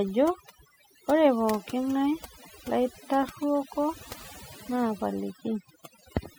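From start to finish the background sits at near silence, dotted with twinkling specks. This is overdone noise removal: a noise reduction process set far too strong for the noisy source. It pulls individual frequency bands down hard or shuts them off whenever they come close to its noise estimate, so the quieter parts of the speech are stripped away along with the noise.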